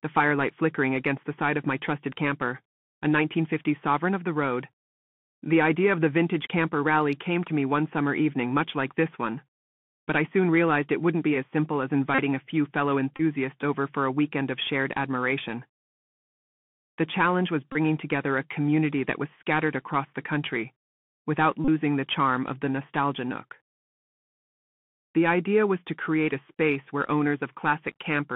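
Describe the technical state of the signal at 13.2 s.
From 13.17 to 13.21 s, just after "a few fellow" and before "over for a weekend", the link between headset and phone dropped voice packets. The chip re-decoded the last good packet's bits instead. The loss of about 26 ms fits roughly seven lost packets repeated at 3.75 ms intervals, and it comes through as a short, steady buzz near 267 Hz until fresh packets resume.

Underneath, the Bluetooth CVSD headset codec is in force here too. Its one-bit, adaptive-step coding, consistent with a 64 kbit/s stream, confines the sound to a 150 Hz to 3.4 kHz band. The codec damage is plainly audible as granular hiss, scratchy sibilants and distortion where loud high content outruns the step size.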